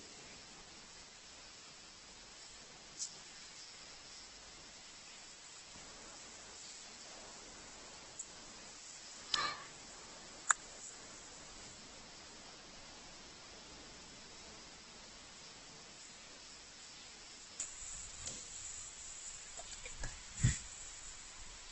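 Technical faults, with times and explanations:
Throughout, Opus compression: the speech sounds rough and grainy, with nothing above 8.2 kHz. Upper bands have a noisy, filled-in texture rather than holes. This likely comes from Opus running in its CELT music mode, heavily starved, which fits a bitrate near 12 kbps.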